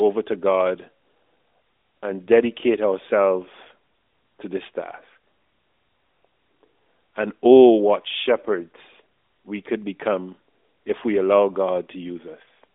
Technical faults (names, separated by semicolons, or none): none